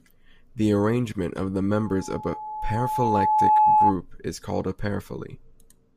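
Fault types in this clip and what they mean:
Loudspeaker feedback squeal: The microphone hears its own loudspeaker, and an 858 Hz tone runs away. It swells over about two seconds, ending well above the speech.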